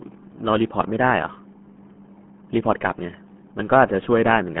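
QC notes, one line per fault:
Throughout, RealAudio 14.4 codec: speech sits in a 150 Hz to 3.4 kHz band with nothing above 3.7 kHz, and heavy coding damage makes it muffled and gargly, which fits an 8 kbit/s dial-up codec. The gargle sets it apart from plain telephone band-limiting.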